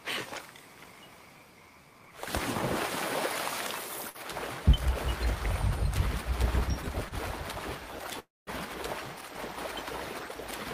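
At 4.09 to 4.18 s and again at 7.09 to 7.14 s there is a short stall from a late packet. The jitter buffer ran dry, so the last sound is held for about 51 ms and then 26 ms with a faint buzz, then resumes with nothing lost. Unlike a dropout, nothing is skipped. The sound is just stretched.

From 8.19 to 8.50 s comes a call audio freeze. The sound stretches into a fading buzz and then falls silent for about 200 ms, with roughly 278 ms inserted in all. The likely cause is packets held up long enough to empty the jitter buffer. It differs from the stalls because it is long enough to fade to silence rather than just lingering briefly.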